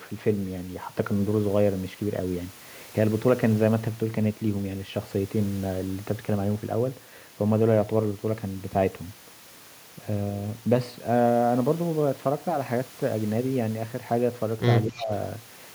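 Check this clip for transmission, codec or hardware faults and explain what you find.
Two faults appear together near the end of the clip, between 14.88 and 15.11 s.

From 14.88 to 15.11 s there is speech suppressed in double talk: the speech dips by up to about 15 dB for roughly a fifth of a second. The likely cause is an echo canceller that, with both sides talking at once, could not tell the near talker from loudspeaker echo and turned both down.

From 14.95 to 15.06 s there is an echo leak: a faint copy of the speech, delayed by 252 ms and sitting around 20 dB below it, briefly comes through. This is likely residual loudspeaker pickup that the far end's echo canceller failed to remove.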